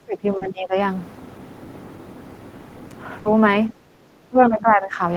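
Speech suppressed in double talk runs from 0.00 to 0.76 s. The speech dips by up to roughly 20 dB for most of that stretch. The likely cause is an echo canceller that heard both ends talking at once, could not tell the near talker from loudspeaker echo, and attenuated everything it received.

Inside that dip, short concealed packet loss sits at 0.37 to 0.43 s. About 40 ms of audio never arrived in time, so the receiver extended the preceding sound to bridge the hole and then blended back into real audio. It comes through as a brief smear or wobble, and a quick consonant there can disappear.

A burst of packet loss follows at 3.19 to 3.27 s, with 60 ms missing. The receiver carried the last sound forward while fading it, so a voiced sound turns into a held buzz and an unvoiced one into a decaying hiss. The audio then picks up further along, and whatever fell in the gap is gone.

Speech suppressed in double talk returns at 3.88 to 4.06 s and again at 4.23 to 5.01 s. 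Here the speech drops by around 15 dB in patches, briefly in the first case and across most of the second. Each time the speech ducks, likely from the canceller again treating overlapping talk as echo.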